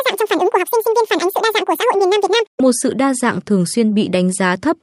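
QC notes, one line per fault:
0.0 to 2.6 s, wrong sample rate: the speech runs at double speed and sits a full octave (12 semitones) too high, chipmunk-style, because the samples are played back without conversion at twice their recorded rate, which fits 24 kHz audio going out at 48 kHz.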